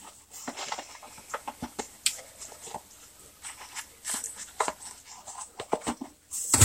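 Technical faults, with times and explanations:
0.94–5.15 s, digital radio blending to analogue: the receiver lost the digital stream and cross-faded over about 200 ms to the FM broadcast, then back. Hiss rises to roughly 25 dB below the signal, and the level shifts about 2 dB.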